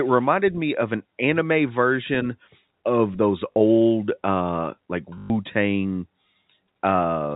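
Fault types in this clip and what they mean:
Packet loss with last packet repeated: at 3.55 s and 5.18 s, lost stretches of 40 ms and 120 ms are filled by replaying the last packet, heard as short robotic stutters.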